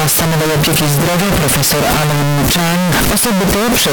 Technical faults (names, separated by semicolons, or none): signed and unsigned mixed up